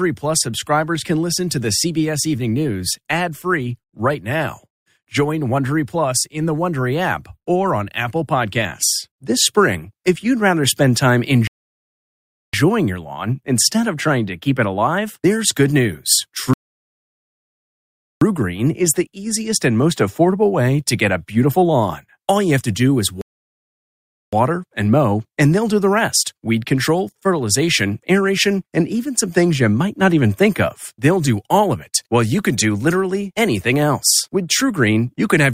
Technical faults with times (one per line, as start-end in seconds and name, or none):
11.47-12.54 rebuffering stall
16.53-18.21 rebuffering stall
23.21-24.33 rebuffering stall